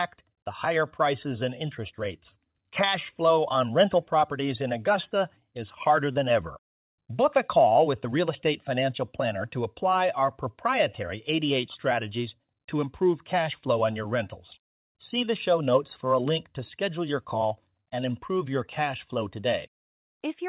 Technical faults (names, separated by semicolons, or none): none